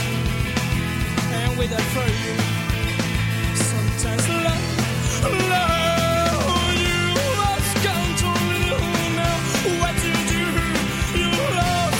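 There are no technical faults to describe at any point in this clip.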